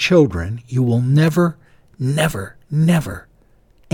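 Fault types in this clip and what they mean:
Clock drift buffer slips: a regular click every 0.66 s from 0.62 s on, likely two mismatched clocks forcing a tiny block of samples to drop or repeat.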